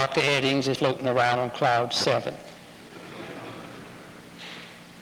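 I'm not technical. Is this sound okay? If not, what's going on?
No, there are two problems. At about 0.75 s there's a skip ahead: nearly half a second of sound got dropped and playback jumps straight to later audio, with the two sides stuck together almost seamlessly, so something is simply missing.

Then comes a jitter buffer speed-up, twice: from 0.85 to 1.82 s it plays about 11% fast, and from 2.36 to 3.78 s about 8% fast. The system had too much audio queued up, so it trimmed tiny slivers to catch up, making things sound hurried without changing pitch.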